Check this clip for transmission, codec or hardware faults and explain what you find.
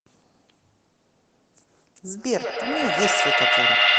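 One fault: feedback echo between two devices, from 2.17 s to the end of the speech. Two devices share the call in one room, and each microphone recaptures the other's loudspeaker. Neither echo canceller removes the other's playback, so the loop keeps circulating. Repeats arrive about a tenth of a second apart and pile up, growing thinner and more ringing, until they peak at about 7 dB above the speech itself.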